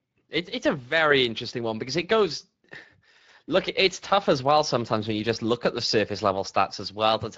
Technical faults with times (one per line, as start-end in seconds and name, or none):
0.00-7.37 Speex codec